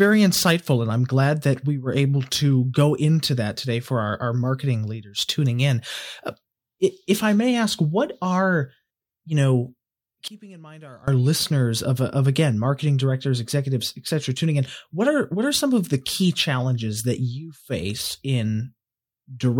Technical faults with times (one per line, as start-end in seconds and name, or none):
10.28-11.08 one channel inverted